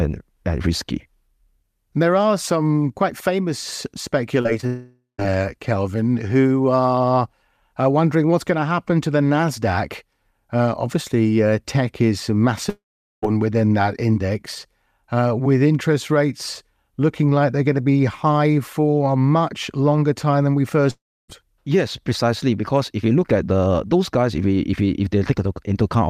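Right after "are some quite famous" there's short concealed packet loss from 4.41 to 4.47 s. About 40 ms of audio never arrived, and the receiver patched most of the gap by carrying the last sound forward before blending back in. A second hole at 4.61 to 4.65 s drops another 20 ms. Both come across as brief smears or wobbles rather than clean cuts, and a short sound in there can get swallowed.

Things then fall apart into what sounds like a long network dropout, likely a stretch where nothing got through, from 4.67 to 5.20 s. The concealment stretches the last sound into a fading buzz or hiss for about half a second and then leaves roughly 150 ms of silence. The same happens after "obviously uh tech is", from 12.69 to 13.24 s, where about 440 ms of silence follows before "within that index". It happens again after "longer time than we", from 20.91 to 21.30 s, with about 300 ms of silence. 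Each time the audio resumes with the missing portion simply gone.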